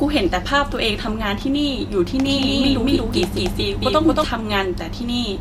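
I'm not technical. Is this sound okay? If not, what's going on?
No. From about 2.26 to 4.24 seconds there's a doubled audio track: the speech is heard twice, with a second, equally loud copy about a fifth of a second behind. That's likely from the same sound being recorded again through a slower path, and it starts and stops abruptly.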